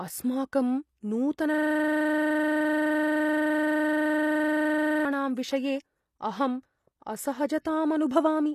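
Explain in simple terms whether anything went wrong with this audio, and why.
From 1.54 s to 5.05 s a system hang loop takes over. The computer stalled while the sound hardware kept replaying its last chunk of audio, a 42.67 ms piece (which fits a 2048-sample buffer) repeated 82 times at 23.4 per second, giving a mechanical repetition.

Throughout the clip the speech carries plainly audible compression damage, likely from HE-AAC compression. Nothing reaches above 14.9 kHz, and this codec rebuilds the treble from copied lower bands rather than keeping the original, so the top end of the sound is not genuine.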